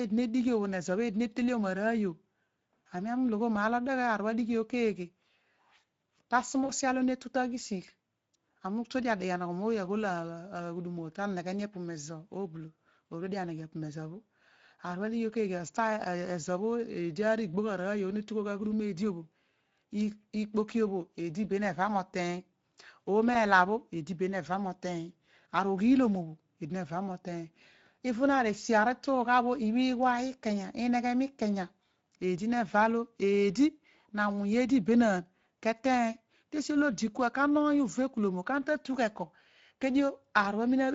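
Throughout the clip the speech carries plainly audible Speex codec damage. Speex is a CELP coder. It rebuilds the voice from a pitch model, a spectral filter and a coded excitation signal. Here the excitation gets too few bits, so the voice sounds noisy and hoarse. The texture is grainy rather than clean. The coding runs at a bitrate near 17 kbps. It stays the same for the whole clip.

From 6.65 to 6.71 s there is VoIP packet loss concealed by the speech codec. About 40 ms of audio never arrived, which fits two lost frames. The decoder filled the gap by repeating its last pitch and filter at falling gain. The sound smears into a brief buzzy tone or coloured noise that fades. A second, shorter loss follows at 23.33 to 23.37 s, about 20 ms long. It gives the same kind of smear, but shorter.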